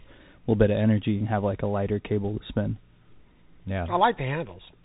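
Thin, muffled speech with a grainy hiss underneath and scratchy s sounds runs the whole clip, with nothing above about 3.8 kHz. This is a Bluetooth CVSD headset codec: one up-or-down bit per sample, consistent with a 64 kbps link, whose adaptive step can't track fast high-frequency detail.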